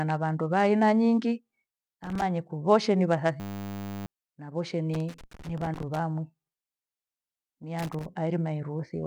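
A worn or dirty contact making and breaking as it moves causes loose connector crackle, chopping the speech into irregular scratchy bursts from 2.04 to 2.22 s, again through a longer stretch from 4.94 to 5.99 s, and finally from 7.79 to 8.06 s.

Between the first two bursts, a system hang loop occurs when the computer stalls while the audio hardware keeps replaying its buffer. From 3.4 to 4.06 s a 10 ms fragment repeats exactly, producing a steady 100 Hz buzz in place of the speech, with roughly 0.7 s of audio lost.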